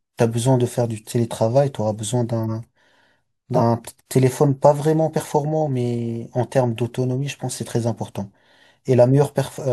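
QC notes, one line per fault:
2.44–2.53 s, corrupt frame decoded: flipped bits in a couple of compressed frames were decoded anyway. Misread gains and codes push energy into the wrong frequencies, giving a brief chirp that peaks at about -20 dBFS.
3.54–3.59 s, corrupt frame decoded: a couple of damaged frames were played as if valid. The misplaced energy reaches close to full scale, making a loud squeaking burst.
9.04–9.13 s, corrupt frame decoded: bit errors in a couple of frames were decoded wrongly, leaving a quieter blip of about -25 dBFS that lasts as long as the bad frames.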